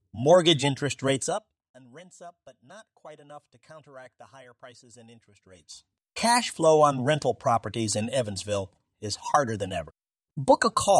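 A speech clip where, from 1.11 to 1.64 s, a level drop of around 25 dB is applied unsmoothed in 2 dB steps, about thirty per second, producing audible zipper noise ticking over the voice.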